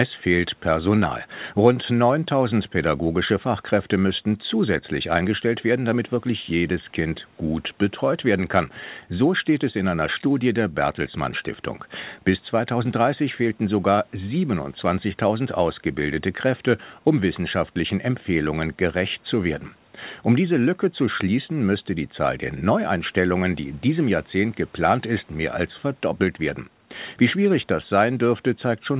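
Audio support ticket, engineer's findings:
No faults found; narrowband call path behaving as expected.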